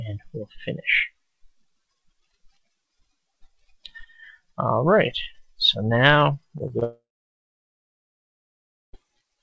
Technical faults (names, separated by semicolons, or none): short concealed packet loss; long network dropout